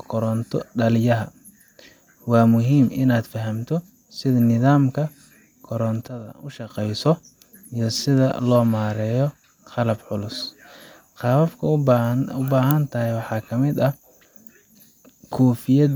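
A sudden gain jump runs from 6.08 to 6.7 s: the speech and its background noise drop together by about 12 dB in a single step and return abruptly. This is likely a gain change applied instantly, sample to sample, with no ramp.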